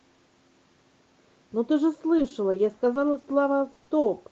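It's a speech clip, and from about 2.17 s to 4.06 s it breaks up with repeated packet loss, giving that choppy, robotic sound. There are around a dozen short holes, the longest about 60 ms, and each one gets papered over by stretching the last bit of sound, so roughly 0.4 s of that stretch is rebuilt rather than real. The Opus call path underneath tops out around 8 kHz, which fits a modest call bitrate.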